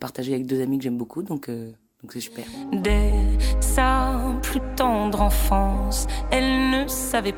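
There are no technical faults to describe at any point in the audio.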